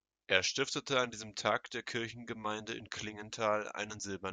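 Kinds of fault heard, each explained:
No technical faults can be heard in this recording.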